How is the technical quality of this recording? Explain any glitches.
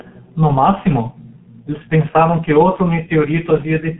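The technical quality is poor: the whole recording carries heavy G.723.1 codec damage. From start to finish the speech is squeezed into a telephone band of roughly 150 Hz to 3.4 kHz, with nothing above 3.8 kHz. The codec models the voice in coarse 30 ms frames at a very low rate, consistent with about 6.3 kbit/s, so consonants smear, the tone turns muffled and hoarse, and fine detail is lost.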